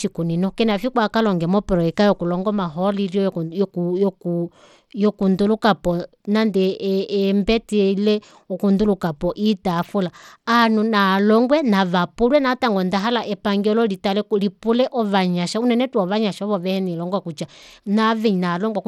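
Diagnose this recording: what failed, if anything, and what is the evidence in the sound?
Codec stage: plainly audible damage throughout the speech, with treble that thins and flickers and a gritty noise riding on it. This is likely Bluetooth SBC compression starved of bits at what sounds like a 96 kbps stream, leaving the upper sub-bands barely coded and the rest coarsely quantised.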